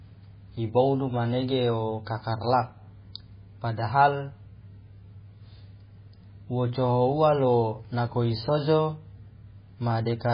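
Throughout, the speech carries heavy MP3 compression artefacts, likely from a very low bitrate near 16 kbps: nothing above 5 kHz, plus watery swirling that a plain low-pass filter wouldn't produce.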